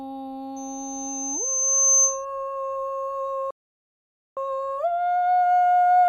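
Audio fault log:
0.56–2.25 s, loudspeaker feedback squeal: A thin, piercing tone near 6.2 kHz rises out of the music, swelling over about one and a half seconds until it sits roughly 5 dB above the rest of the sound, then cuts off. A microphone is hearing the loudspeaker it feeds, and at that one frequency the loop returns more than it sends out. Each pass reinforces the tone, so it keeps growing until something limits it or the loop is broken.
3.51–4.37 s, playback stall: The music stops dead in mid-flow and leaves about 0.86 s of silence before the sound returns. This gap is likely caused by the player running short of data or having its processing thread held up. With nothing to send to the output, it fell silent until fresh material arrived.
4.37–6.09 s, time-compressed catch-up: From the moment the music resumes to the end, it runs hurried at about 1.1 times normal speed. The pitch stays where it should be. 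To work off the backlog built up during the stall, the player is cutting out short slices and cross-fading over the joins. This tightens the timing without shifting the key.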